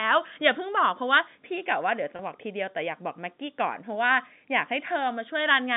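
Packet loss with pitch repetition interrupts this telephone-band speech at 2.16 to 2.19 s. About 30 ms of audio went missing, which fits a single lost packet, and the receiver filled the gap by repeating the last pitch period, so the sound briefly holds on a slightly buzzy, sustained tone before the speech resumes. The G.711 mu-law line coding limits the band to roughly 150 Hz to 3.7 kHz.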